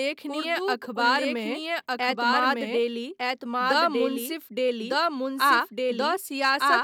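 Throughout the speech, a doubled audio track is present: a second full-band copy of the same audio runs about one second behind the original at roughly equal level. The lagging copy carries no decay or room colouring, so it sounds like a clean, separate repetition overlapping the live signal rather than an echo. The likely cause is the signal being captured a second time through a slower path, or an edit leaving two copies out of step.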